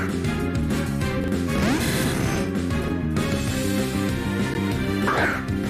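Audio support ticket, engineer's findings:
Chunks out of order, 1.20–1.28 s and 2.80–2.88 s: one 40 ms chunk delivered a chunk late, swapped with its neighbour. Brief jumbled skip, three hard joins each time.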